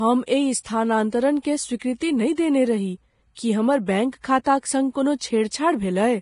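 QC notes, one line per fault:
Throughout: Vorbis compression. The speech has nothing above 10.6 kHz, and what treble remains is a granular hiss with rough tonal edges and smeared consonant onsets. The likely cause is low-quality Vorbis encoding that replaces fine high-frequency detail with noise of matching energy. The heavy damage fits roughly 30 kbps.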